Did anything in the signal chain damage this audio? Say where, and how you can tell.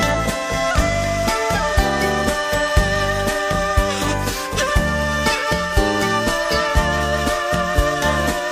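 No, nothing in the signal chain has left an audible mark on this audio. Listening through, no stage from capture to playback shows any sign of damage.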